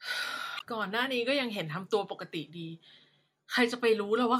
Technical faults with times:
0.56-0.62 damaged data in a compressed stream

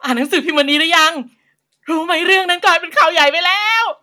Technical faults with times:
none

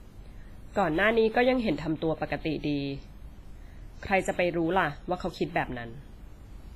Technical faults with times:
0.00-6.75 WMA compression

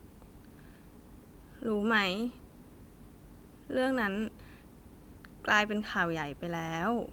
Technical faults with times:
none

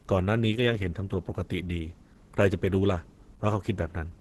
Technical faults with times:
0.00-4.21 Opus compression

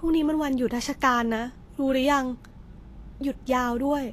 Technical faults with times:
0.00-4.12 Vorbis compression

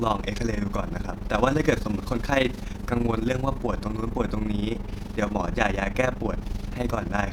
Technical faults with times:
0.00-7.32 overlap-add ripple

